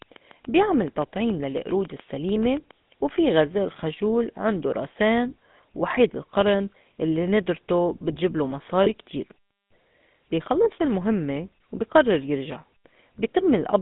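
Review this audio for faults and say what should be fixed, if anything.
The whole thing's gone through the GSM full-rate codec, and you can plainly hear it: a buzzy, gravelly texture from the pulse-train excitation, with the band squeezed to roughly 150 Hz to 3.7 kHz. The grain fits the 13 kbps full-rate coder. To prevent it, record or route the speech on a wideband path rather than through the old GSM leg.

There's also a lost GSM frame from 8.84 to 8.9 s, right after "القرِن اللّي ندرته بتجبلو". The decoder held the last good frame, so you get a brief metallic ring. That fits a single 20 ms frame dropped. A cleaner radio link or better error protection on the channel would avoid it.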